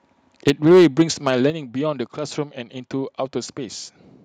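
From 0.47 to 1.3 s the speech shows microphone overload: the loudest syllables carry a harsh, crackling edge with flattened tops, likely from input gain set about 5 dB too high for the converter, clipping a small share of samples. A microphone volume step-down follows at 0.5 s, a sudden drop of about 4 dB, likely the call software cutting device gain in reaction to the clipping. At 1.5 s a second step drops the voice and background together by about 7 dB.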